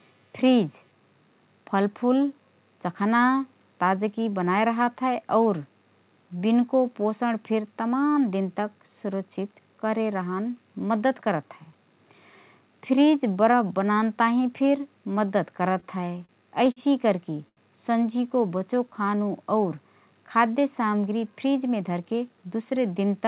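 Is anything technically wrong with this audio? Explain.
Yes, the speech shows four jitter-buffer faults, all heard through a narrowband call path with nothing above 4 kHz, which fits G.711 mu-law at 64 kbps.

Repeated stalls (stutter), 15.8 to 16.79 s: packets kept arriving late, so the buffer ran dry five times and the receiver continued the last sound for 125 ms in total, the longest gap 48 ms. About 13% of that span is filled in, so the speech drags and stutters.

Short stall from a late packet, 17.48 to 17.60 s: one packet missed its slot and the buffer emptied. The receiver stretched the last sound for 84 ms until it arrived, then resumed where it left off, leaving a sound held too long with a faint buzz or dip.

Jitter buffer slow-down, 18.27 to 19.29 s: with the buffer running low, the receiver repeated single pitch periods and bits of pauses to build a reserve, adding 92 ms. The speech plays at 92% speed at unchanged pitch, drawn out, sometimes with a slight warble.

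Jitter buffer speed-up, 21.27 to 22.38 s: the buffer held more audio than its target, so the receiver cut short pieces of one or a few pitch periods, roughly 150 ms in all. Speech runs at 112% speed, same pitch, sounding hurried.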